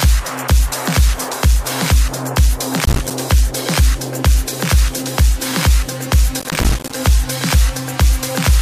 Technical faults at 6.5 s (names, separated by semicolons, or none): processor overload crackle